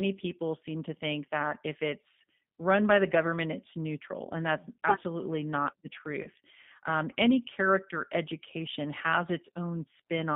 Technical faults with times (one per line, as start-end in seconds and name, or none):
0.00-10.36 G.729 codec
6.23-6.29 VoIP packet loss concealed by the speech codec